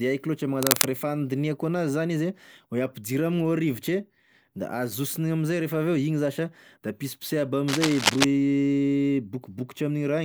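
A speech recording with two bursts of cable scratch noise. The first runs from 0.63 to 0.85 s and sits about 5 dB above the speech. The second lasts from 7.68 to 8.25 s, at roughly the same level as the speech. Both are dense, ragged crackles laid over the sound. They likely come from a worn cable or connector being moved, so its contact resistance jumps about and injects rough noise.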